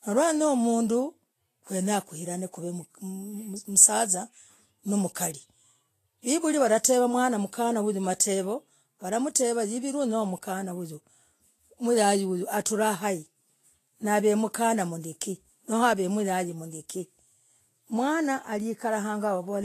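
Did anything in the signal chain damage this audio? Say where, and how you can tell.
Yes, at the codec. Throughout, the speech is hissy and grainy, with nothing above 14.2 kHz. Likely Vorbis compression, its treble quantised into noise.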